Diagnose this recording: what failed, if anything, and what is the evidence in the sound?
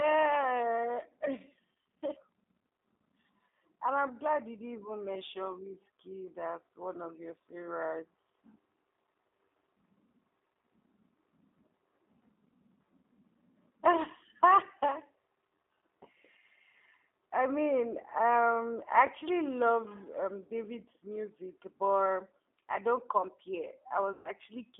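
Codec stage: the speech passes through a G.729 codec at 8 kbit/s, band-limited to roughly 250 Hz–3.6 kHz, and its pulse-based reconstruction makes the voice plainly rough and synthetic throughout.

Network stage: VoIP packet loss concealed by the speech codec from 24.13 to 24.29 s, after "I don't compare". About 120 ms went missing, and the decoder extrapolated from its last pitch and filter, lowering the gain frame by frame into a fading buzzy tone or coloured noise.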